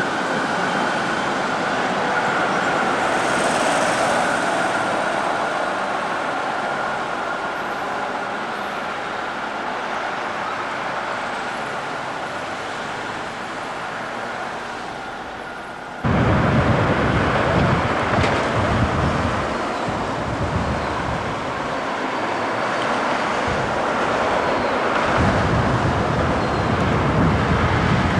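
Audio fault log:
Throughout: doubled audio track. Every sound is followed by a second, complete copy about 150 ms later. The copy is about 5 dB quieter than the original. It carries the full frequency range and has no decay or room colour, so it sounds like a distinct repeat rather than reverb. The gap stays fixed for the whole clip. The likely cause is the same signal being captured twice, once through a slower path.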